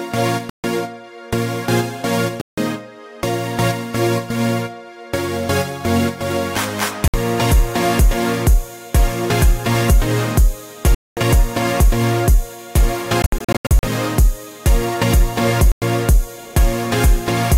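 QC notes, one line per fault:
0.50 s, 2.41 s, 7.08 s, 10.95 s, 15.72 s: Bluetooth dropout, likely cause. The sound cuts out for about 0.14, 0.16, 0.06, 0.22 and 0.10 s and resumes further along, as if it kept playing while the headphones received nothing. On a waveform each is a flat-line hole; on a spectrogram, a clean vertical blank band across all frequencies.
13.22–13.83 s: Bluetooth dropout again, likely cause, broken up: about 0.33 s lost in scattered holes over 0.61 s, the longest about 80 ms, so it stutters rather than going quiet once. It shows as a comb of short blank slices.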